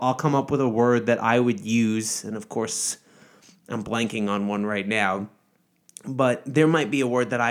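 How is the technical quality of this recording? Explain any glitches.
Nothing to flag: no audible technical faults anywhere in the speech recording.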